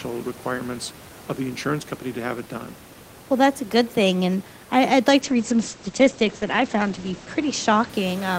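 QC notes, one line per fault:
5.22–7.95 s, call bitrate drop: just after "I would like", the top of the spectrum collapses from about 20 kHz to 8 kHz and the sound turns coarse and muffled, staying at its worst for about 2.1 s. The encoder was told to spend far fewer bits, so it dropped the high band and quantised the rest more crudely. The dulling fits a fall from roughly 32 kbps to 11 kbps, and the room noise, about 19 dB below the speech, dulls along with it.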